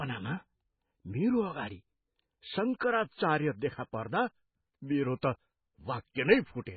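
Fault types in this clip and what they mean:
MP3 compression: The whole clip sounds like it has been squeezed through a very low-bitrate MP3 encode, likely at around 16 kbps. Nothing survives above about 4.5 kHz, so the speech loses its top end and s sounds go dull. The damage is heavy. Weak frequency lines keep dropping in and out between frames, which gives that watery, swirly texture, and the consonant attacks come out smeared rather than crisp.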